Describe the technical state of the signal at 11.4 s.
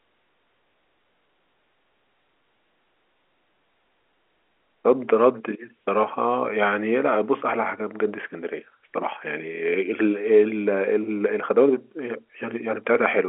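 At 11.4 s the speech is intact, carried through normal G.711 telephone coding with the band ending below about 3.9 kHz and no fault present at that moment.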